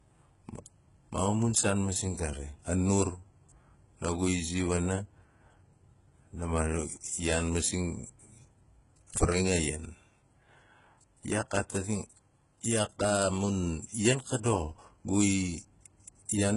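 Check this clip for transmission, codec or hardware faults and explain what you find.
One codec fault runs through the whole speech clip. It sounds like HE-AAC compression at a very low bitrate, around 12 kbps. The treble is likely rebuilt by spectral band replication: lower bands are copied upward under a coarse envelope, so the harmonics don't line up. The s sounds turn gritty and metallic. On a spectrogram, the copied upper bands look smeared and blocky, and everything stops sharply at 11.1 kHz.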